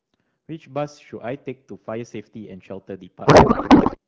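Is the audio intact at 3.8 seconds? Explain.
No. From 3.25 to 3.97 s there is a codec payload misread: AMR-WB frames packed in octet-aligned form are unpacked as bandwidth-efficient, so the decoder takes its parameters from the wrong bit positions. The speech there becomes garbled noise and warble that barely follows it.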